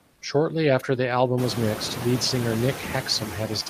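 It's a short speech clip with noise suppressor artifacts all the way through. The suppressor pulls the steady background down by about 19 dB between phrases and lets it back up under the talking, so the leftover noise pumps and flutters. That's most obvious once the room noise jumps by about 22 dB around a second and a half in. Right at the start, from 0.13 to 0.21 s, you get comfort noise in place of the background. For those 80 ms the real room sound is swapped for a smooth, featureless hiss about 2 dB quieter. That's likely Opus DTX stopping transmission during the pause and having the receiver fill the gap with synthetic noise.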